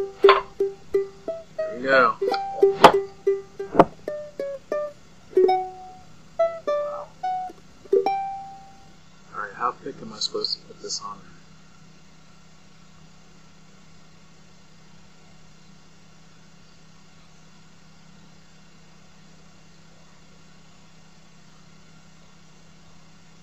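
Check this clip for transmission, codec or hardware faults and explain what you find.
There is one fault, audio missing between chunks, heard as three brief skips at 9.54, 15.52 and 21.50 s. Each removes roughly 20 ms and the sound resumes immediately. The cause is likely a recorder or processor working in 6-second blocks and losing a sliver at each handover, which fits the steady 6 s spacing. Unlike a packet-loss dropout, there is no silent gap or concealment smear, and the skips fall at a fixed interval rather than scattered.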